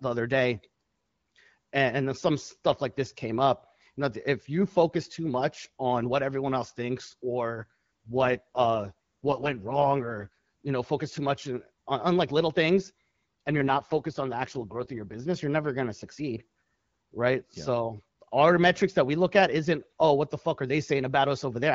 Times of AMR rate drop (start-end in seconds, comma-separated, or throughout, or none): 7.56-10.28, 13.48-15.27